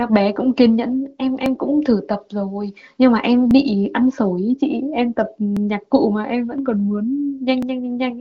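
From 1.46 s to 7.63 s, regular clicks recur every 2.05 s, about four in all. They are likely clock drift buffer slips: a mismatch of several hundred parts per million periodically drops or repeats about 70 samples. A waveform shows discontinuities, and a spectrogram shows thin vertical broadband lines, cutting across the AMR-WB band that ends near 7.3 kHz.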